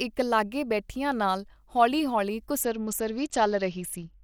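After "ਬੈਠਿਆਂ ਨਾਲ ਹੌਲੀ ਹੌਲੀ", from 2.61 to 4.23 s, a Bluetooth SBC bit pool drop dulls the treble and adds gritty noise. The spectrogram's upper bands go empty, consistent with roughly 78 kbps.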